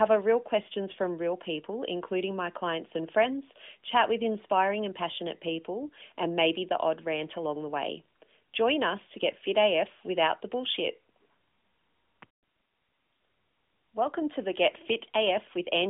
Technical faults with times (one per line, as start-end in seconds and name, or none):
none